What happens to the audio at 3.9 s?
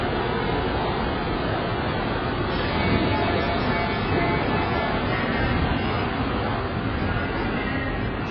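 At 3.9 s the audio carries the same AAC compression damage heard throughout: heavy, likely from AAC-LC at a very low bitrate around 12 kbps. Coarse quantisation strips detail, leaving a dull, smeared, warbling sound. A spectrogram shows a hard ceiling near 5.6 kHz.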